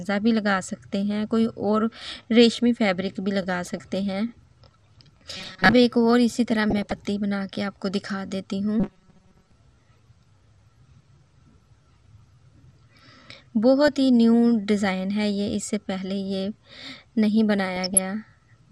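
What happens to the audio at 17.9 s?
Right there you're hearing DAB burbling, running from about 17.72 to 17.99 s. Bit errors have slipped past error correction into the audio data, so wrong samples put short blips of noise into individual sub-bands. It comes out as a short stretch of burbling, which fits a bit error rate of a fraction of a percent.

Underneath that, and through the whole clip, the sound is dull with a gurgling, grainy edge. That's MP2 compression, likely at a low rate around 80 kbps, where upper sub-bands are switched off and the remaining bands are coarsely quantised.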